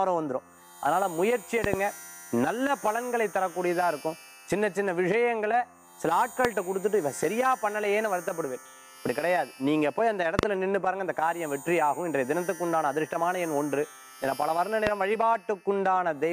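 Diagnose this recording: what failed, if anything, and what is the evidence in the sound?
Sharp loud pops land on top of the sound, which carries on beneath them: doubled at 1.64–1.76 s and 10.39–10.45 s, single at 6.45–6.47 s and 14.87–14.89 s, peaking roughly 15–20 dB above it. Likely voltage spikes in the analogue wiring, from a loose plug or static.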